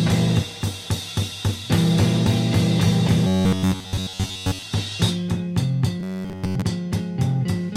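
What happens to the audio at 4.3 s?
The music has turned to a robotic sound from repeated short buffers, from 3.27 to 4.62 s. A fixed 93.8 Hz buzz rides over it. Most of it is likely a repeated buffer of about 11 ms.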